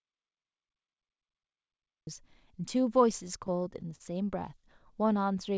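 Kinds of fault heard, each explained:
Audio dropout to silence: the clip opens in dead silence, with no room tone, until 2.07 s, likely a lost input while silence kept being written.
Repeated stalls (stutter): from 3.28 to 4.02 s the speech drags through six brief hitches up to 42 ms, as a starved jitter buffer stretched the last sound.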